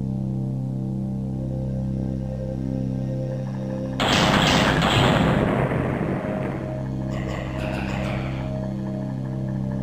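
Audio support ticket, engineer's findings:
Overlap-add ripple across the whole clip. Metallic buzz with extra tones around each note, ripple around 100 Hz, level swinging about 6 dB per cycle. Probable component: frame-based resynthesis stage. Window and overlap not summing to constant gain; roughly 10 ms hop.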